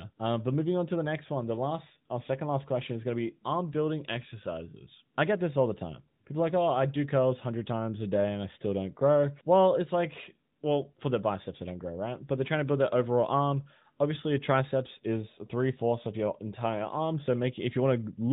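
Nothing goes wrong anywhere in this speech recording, so there's no technical fault to point to.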